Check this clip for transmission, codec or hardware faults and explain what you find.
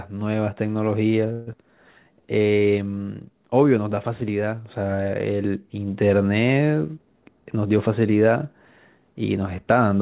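Three transmission faults are audible, all from packet delivery and jitter buffer handling. The band stops at 4 kHz, which points to G.711 mu-law at 64 kbps.

From 1.32 to 1.55 s there is a long network dropout. The speech gives way to a concealment buzz lasting about 200 ms, and about 100 ms of speech never returns. The likely cause is lost packets.

From 1.75 to 2.60 s there is a jitter buffer slow-down. Repeated pitch periods add about 107 ms and play the speech at 88% speed. The sound is drawn out, with the pitch unchanged.

From 6.97 to 7.88 s there is a jitter buffer speed-up. Pitch periods are cut, roughly 150 ms in all, to shrink the buffer. The speech runs at 116% speed and sounds hurried.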